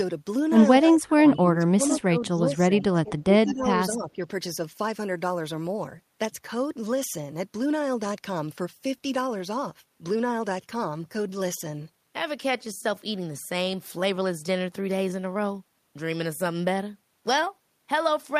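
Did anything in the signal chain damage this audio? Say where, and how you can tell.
Yes, in the call processing. From 0.8 to 4.24 s the speech keeps dipping, by around 15 dB at worst, for about three seconds in all. That's likely speech suppressed in double talk: the echo canceller couldn't tell this talker from the far end and turned everything down.

Right inside that stretch, from 3.47 to 3.54 s, there's a faint copy of the voice trailing by 186 ms, roughly 25 dB under the speech. That's most likely echo leak: a loudspeaker end's canceller let some of its mic pickup through and sent it back.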